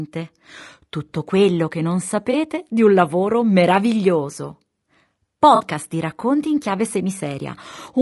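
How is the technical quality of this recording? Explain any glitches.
The speech is clearly degraded throughout by codec damage, and there are two brief dropouts patched over by the decoder.

Low-delay AAC compression is audible across the whole clip, likely from AAC-ELD at roughly 32 kbps. Its short analysis frames resolve the voice's harmonics coarsely, so the speech sounds rough and grainy, with a hiss filling the gaps between harmonics and a thin, synthetic-sounding top band. On a spectrogram the harmonic stripes look blurred and speckled, with noise between them and a patchy, smoothed upper region.

AAC frame loss with concealment occurs twice. The first is at 2.31–2.35 s, between "quello che non" and "di un lavoro meraviglioso". The second is at 5.55–5.61 s, just before "di racconti in chiave". The gaps are about 20 ms and 40 ms long, which points to one and two lost frames. Each time, the decoder rebuilt the missing audio from the last good spectrum, so the speech briefly turns smeared and phasey. 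A spectrogram shows a short vertical band of blurred, noise-like energy at each spot. The waveform keeps its level there but loses its periodic shape.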